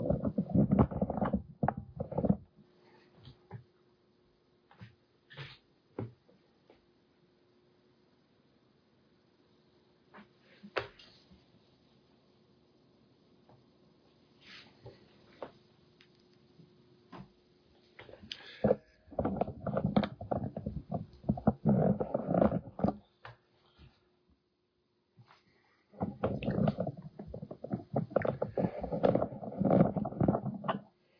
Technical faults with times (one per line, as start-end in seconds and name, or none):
none